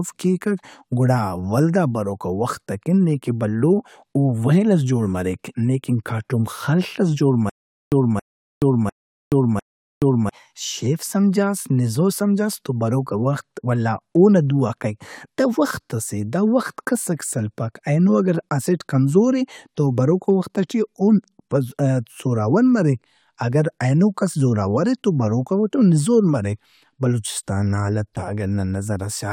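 Just after "ئس جوڑ", from 7.50 to 10.29 s, there is a stutter with silent gaps. A 275 ms fragment repeats four times, every 700 ms. Digital silence of 425 ms follows each repeat. A stalled player likely kept replaying its last fragment. The audio due there is lost.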